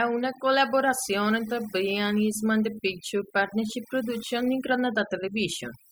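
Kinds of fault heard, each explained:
Overdone noise removal: the denoiser's cranked way too hard, so the background drops and breaks up into little twinkly specks.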